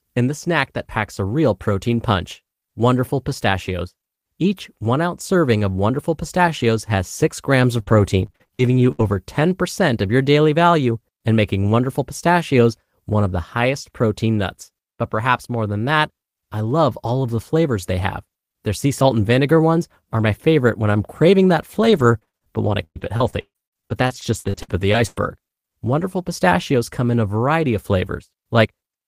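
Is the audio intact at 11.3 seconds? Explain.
Yes, the speech at 11.3 seconds plays through cleanly, with no dropout, click, distortion or other fault at that point.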